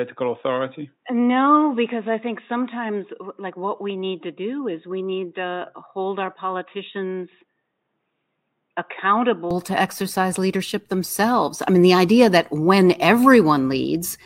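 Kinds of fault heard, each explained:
Input switched to a poorer device: until 9.51 s the speech is cut above 3.8 kHz and quieter, then abruptly brightens with no gap, likely a device change, not a filter.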